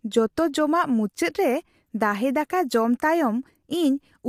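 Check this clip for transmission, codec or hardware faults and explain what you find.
One codec fault runs through the whole speech clip. From start to finish the voice sounds rough and grainy, with noise filling the gaps between harmonics and a top band that is lowered or synthetic. That is plainly audible low-delay AAC compression damage, likely from AAC-ELD at a bitrate around 32 kbps.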